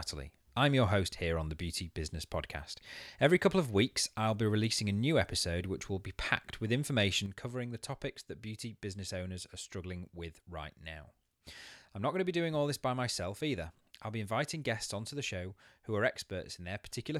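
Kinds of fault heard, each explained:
One channel drops out: from 7.26 s onward, the speech abruptly falls about 6 dB, likely because one stereo channel vanished before the mono sum.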